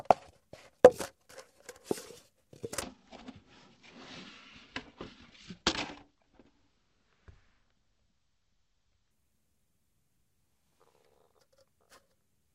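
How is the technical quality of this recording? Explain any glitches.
There's one real problem here, and it's a big one. From 2.82 s to 9.11 s the audio suffers from stereo read as mono. The left and right samples, which are supposed to alternate as two channels, get played back one after another as a single stream. That doubles the number of samples per second of real time, so everything drags to half speed and drops a full octave, 12 semitones down. You'll also hear a faint mirrored copy of the sound folded up into the top half of the spectrum.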